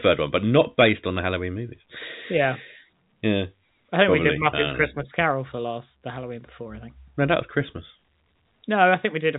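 Telephone-band speech with no technical faults.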